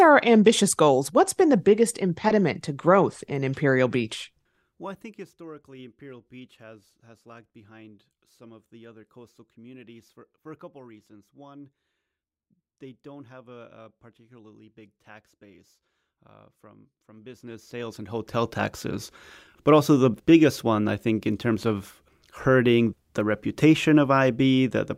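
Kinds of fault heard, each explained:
Zipper noise: The gain control moved the level in coarse jumps, around 40 a second, instead of gliding between values. Each jump left a tiny discontinuity in the waveform. From 17.15 to 18.52 s, while the speech level shifts by roughly 25 dB, those discontinuities pile up into a fast ticking, zipping texture laid over the speech.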